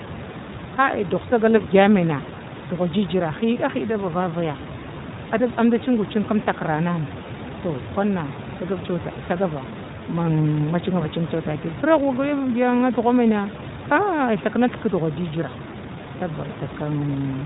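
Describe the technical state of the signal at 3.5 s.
Lost iLBC frames at 3.54 to 3.58 s: a 20 ms gap, which fits one dropped frame, is filled by the decoder repeating the last pitch cycle mixed with noise, so it sounds like a brief buzzy, held vowel before clean recovery. The iLBC codec also shapes the signal here at a 15.2 kbps rate with 20 ms frames, cutting everything above 4 kHz and leaving the speech plainly rough and synthetic.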